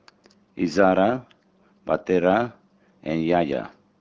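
No technical faults are audible.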